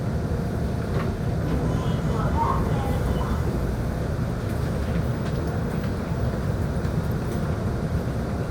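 Everyday sounds, broken three times by short chirp-like blips at 1.41–1.44 s, 3.45–3.49 s (the faintest) and 7.88–7.91 s. Each is a corrupt frame decoded: damaged compressed data, a couple of frames each time, played anyway, throwing energy into wrong frequencies.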